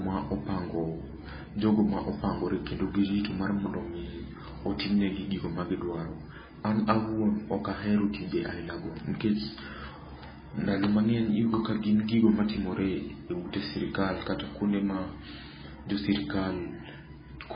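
Speech runs the whole way through with heavy damage. Nothing is heard above 5 kHz, so the treble is simply gone. The voice sounds watery and swirly throughout. Quiet detail flickers in and out from moment to moment. S sounds turn into metallic chirps. The likely cause is MP3 compression at a very low bitrate, with a sound that fits about 16 kbps. Starved of bits, the encoder cut the top band and zeroed weak frequency lines.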